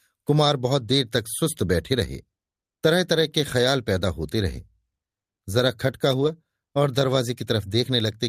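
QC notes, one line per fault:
6.11–6.29 s, lost packet rebuilt from error correction: a short stretch of the speech turns grainy and noisier with no dropout or silence, because the missing packets were replaced by the low-bitrate backup copies carried in the packets that followed. About 100 ms of audio is rebuilt this way, which points to several lost packets. Unlike plain loss concealment, the audio comes from real backup copies rather than being guessed: the sound stays continuous, just coarser.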